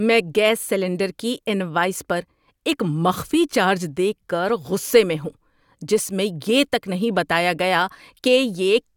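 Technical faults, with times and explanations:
No technical faults heard.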